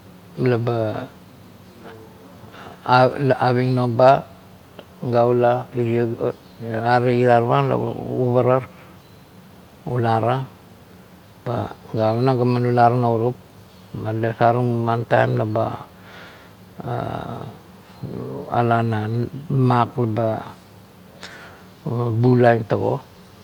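No technical faults can be heard in the recording.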